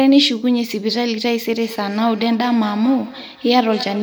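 Speech, with feedback echo between two devices from 1.6 s to the end: the sound returns roughly every 200 ms, peaking about 15 dB below the direct speech, as a second device's loudspeaker feeds a microphone whose canceller only removes its own playback.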